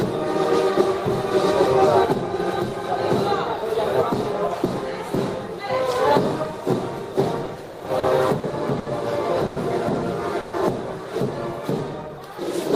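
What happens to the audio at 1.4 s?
Nothing goes wrong at 1.4 s: the audio plays through that moment intact, with no dropout, click or distortion.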